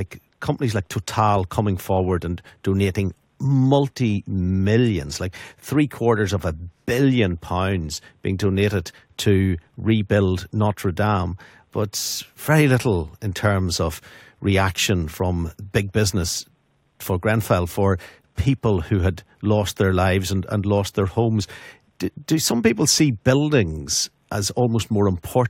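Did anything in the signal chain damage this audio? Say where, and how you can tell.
No, nothing in the signal chain damaged this audio.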